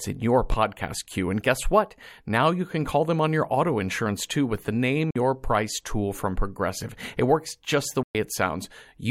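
At 0.52 to 0.55 s, just after "in your", a single loud pop rises a few dB above the speech, likely a voltage pulse from a plug, switch or static. Bluetooth dropouts then cut the audio to silence at 5.11 to 5.16 s, about 46 ms, and at 8.03 to 8.15 s, about 116 ms, after "works just the". Speech resumes further along each time, as if it had played on, likely because packets missed the headphones.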